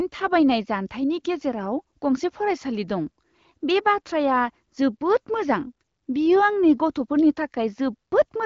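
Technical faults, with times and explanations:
No faults found; the speech is carried over an AMR wideband (HD Voice) link with nothing above about 7.2 kHz, and its light coding character fits a rate around 15.85 kbit/s.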